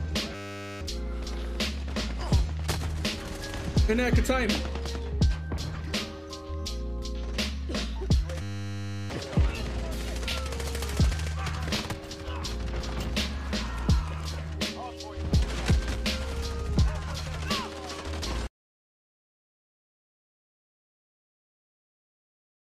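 At 0.35 s and again at 8.42 s a system hang loop occurs. The playback system stalled while the audio hardware kept replaying the same 10 ms slice of its ring buffer, so one tiny fragment repeats at 100 Hz. This is heard as a steady, flat buzz at that pitch, lasting until 0.81 s and then until 9.10 s. The first stall loses about half a second of the sound, the second about 0.7 s.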